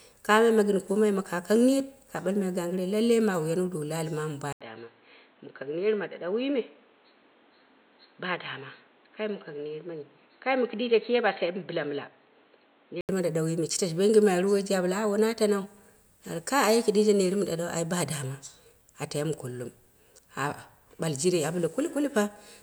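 An input switched to a poorer device runs from 4.53 s to 13.09 s of this speech clip. After a brief gap of about 80 ms, the sound turns dull and boxy, with nothing above 4.2 kHz, drops by roughly 5 dB, and picks up a new noise floor around 30 dB below the signal. At 13.09 s it clears again. The likely cause is the recording input changing to a narrower-band microphone or headset profile and then back.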